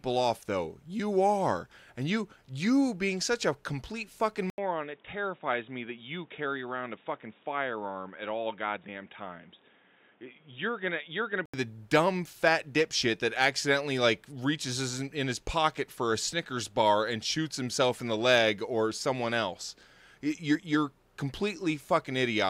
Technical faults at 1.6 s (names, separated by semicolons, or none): none